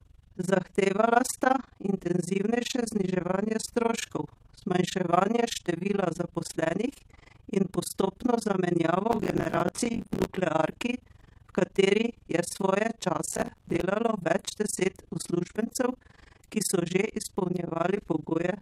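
Speech runs through an overlap-add ripple from start to finish. The level pumps up and down at around 20 Hz, swinging by about 60 dB. That gives a hard, robotic flutter on every syllable. The cause is frame-based processing. The audio was windowed into frames and rebuilt with an overlap whose windows do not add up to a steady gain. So the level dips and swells once per frame.

Processor overload crackle breaks in twice, from 9.12 to 10.37 s and from 13.28 to 13.81 s. Both bursts sound gritty and torn. Tiny fragments of earlier audio are replayed with sharp edges. The processor kept missing its deadlines, dozens of times in a row. Each late buffer was filled with stale audio instead of the right samples. The spacing of the clicks fits buffers of roughly 10 ms. The crackle stops once the load eases.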